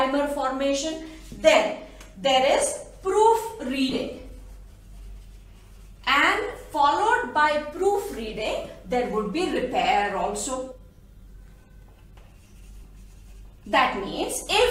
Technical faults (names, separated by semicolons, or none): compressed frames skipped